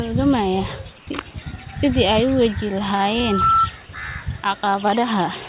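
A speech clip in which the room's background noise briefly turns flat and featureless from 0.98 to 1.07 s, a stretch of about 90 ms where its natural texture gives way to a smooth hiss about 3 dB quieter. This is comfort noise in place of the background, likely because the sender paused transmission during a gap and the receiver filled it with synthetic noise matched only roughly to the real room sound, which otherwise sits about 28 dB below the speech. Nothing is heard above 4 kHz, which fits a narrowband G.711 call codec.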